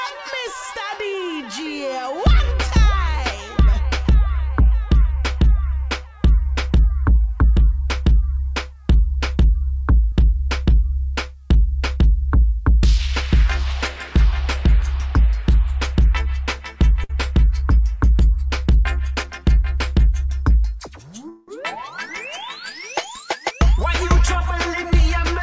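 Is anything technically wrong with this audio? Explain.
Yes, the audio is disrupted three times by jitter-buffer faults, heard over a call path whose band stops at 8 kHz, which fits G.722 at 64 kbps.

At 17.04–17.11 s, a short stall from a late packet holds the last sound for 55 ms with a faint buzz or dip. Nothing is lost; the sound is only briefly prolonged.

At 19.10–19.39 s, a jitter buffer speed-up trims about 50 ms in pitch-period pieces, so the audio hurries at 113% speed with unchanged pitch, unlike a resampling error.

At 21.29–21.50 s, a call audio freeze stretches the sound into a fading buzz or hiss for 188 ms, likely from packets held up in transit. It is longer than the earlier stall.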